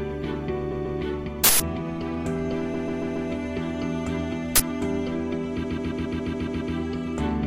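At 0.71–0.99 s, repeated frames make the sound stutter. A 139 ms block, which fits a run of six compressed frames, plays twice more and lengthens the audio by about 0.28 s. Nothing is lost; the same fraction of a second simply loops.

At 1.44–1.60 s, an uninitialised buffer plays stale memory as samples for 160 ms. The result is a burst of digital noise. Unlike the stutter, it bears no relation to the surrounding sound.

At 2.73–3.29 s, the same 139 ms block repeats four extra times, adding about 0.56 s.

At 4.56–4.60 s, a second uninitialised-buffer burst lasts 40 ms.

At 5.63–6.74 s, the block loops eight extra times, adding about 1.1 s.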